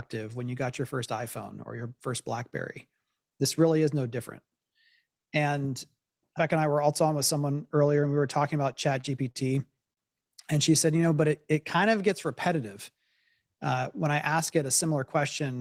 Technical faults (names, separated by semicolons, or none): repeated stalls (stutter); short stall from a late packet; jitter buffer slow-down; jitter buffer speed-up